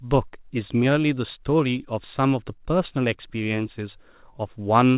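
A speech recording with no technical fault to report. It has come through a WebRTC call path, and the lack of anything above 4 kHz fits a narrowband G.711 mu-law codec at 64 kbps.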